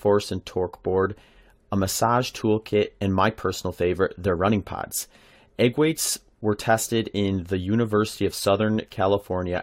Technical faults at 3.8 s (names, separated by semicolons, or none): none